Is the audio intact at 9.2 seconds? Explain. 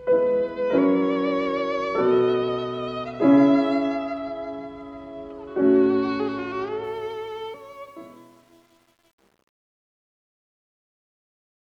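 No. Truncation distortion on a fade runs from 6.84 s to the end. A 9-bit gain stage without dither steps the fading waveform, making 9.2 s gritty.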